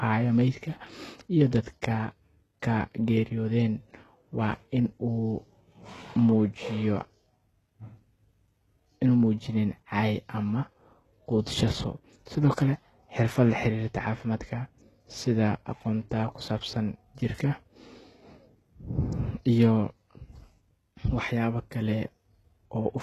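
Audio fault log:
Throughout: HE-AAC compression, likely, and the damage is easy to hear. The speech has nothing above about 12.3 kHz, and the top end sounds bright but synthetic. The encoder seems to keep only the lower band properly and fake the treble by copying lower bands upward under a coarse envelope, so the upper harmonics don't match the real ones. That's why the s sounds come out gritty and lispy, which fits a very low bitrate around 16 kbps.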